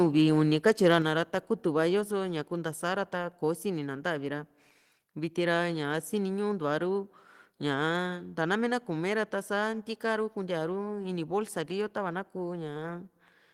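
From 0.65 to 0.98 s the speech shows microphone overload: loud syllables turn harsh and crackly, their peaks flattened. The likely cause is input gain set about 3 dB too high, driving the converter past full scale so that around two percent of samples are clipped.

At 1.02 s a microphone volume step-down follows: voice and background drop together by about 4 dB in one abrupt step. This is likely the call software reacting to the preceding clipped peaks and cutting the device's input gain.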